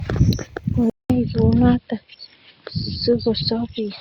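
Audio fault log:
0.90–4.00 s, input switched to a poorer device: after a gap of about 200 ms the speech returns duller, a few dB quieter, and over a faint new background noise. Nothing above 5.3 kHz survives, which is likely the system changing to a narrower-band microphone mid-recording. On a spectrogram the upper band goes abruptly empty after a vertical blank strip, and the noise floor shifts. The waveform shows a flat gap, then lower peaks.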